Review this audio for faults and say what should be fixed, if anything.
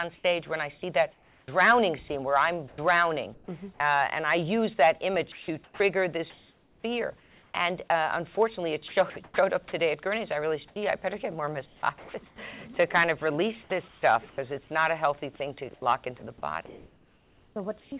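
Sound chopped by the voice detector at 1.12–3.48, 5.32–7.90, 8.88–9.72, 11.66–12.38 and 15.74–17.92 s. The sender's detector likely kept switching transmission on and off, replacing 0.32 to 1.22 s per stretch with comfort noise. On a spectrogram these show as flat, even noise patches breaking up the signal.

Sound dropped by the voice detector at 10.68–10.76 and 13.64–13.70 s. Quiet sound was likely taken for background and went untransmitted, leaving 80 and 60 ms of steady noise. The waveform shows short, flat-envelope gaps.

Comfort noise in place of the background from 13.64 to 14.38 s. Transmission likely paused, so 280 ms of real background became featureless synthetic hiss, visible as uniform, detail-free texture below the 4 kHz band limit.

Disabling discontinuous transmission on the sender, or lowering its voice detector threshold and lengthening its hangover time, would prevent all three.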